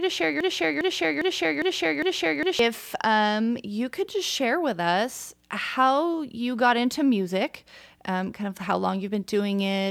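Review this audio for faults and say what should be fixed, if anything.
From 0.00 to 2.59 s, a 0.40 s fragment repeats five times before "um you could just": a broken-record loop, likely a stalled stream resending its last fragment. To prevent it, make the player output silence on a stall rather than replaying its held buffer.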